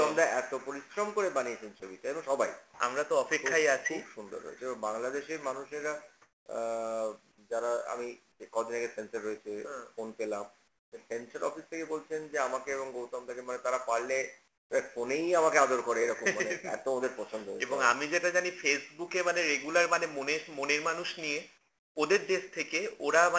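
The audio has come through a call path, and the band stops at 8 kHz, which fits a wideband codec like G.722. Right at 1.80 s there's a tiny gap where about 20 ms of sound gives way to flat noise and roughly 10 ms of real content goes missing. That's sound dropped by the voice detector. The likely cause is the sender's detector mistaking that bit for background, stopping transmission briefly, and leaving the receiver to paper over it with synthetic fill. The bigger pattern is comfort noise in place of the background at 6.22–6.46 s, 8.32–8.40 s, 10.68–10.92 s, 14.48–14.70 s and 21.58–21.96 s. In those pauses the real background, sitting about 42 dB under the loud parts, gets swapped for a smooth, featureless hiss. At 6.22 s the level barely moves (about 1 dB up). Elsewhere the fill is noticeably quieter, about 8 to 14 dB down, so the room seems to drop out and then snap back when the sound resumes. 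The likely cause is discontinuous transmission: the sender goes quiet when it hears no speech, and the receiver generates noise shaped roughly like the background to cover the gap.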